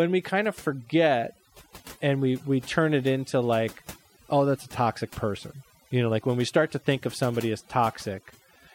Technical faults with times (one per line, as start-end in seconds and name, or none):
0.00-8.75 overdone noise removal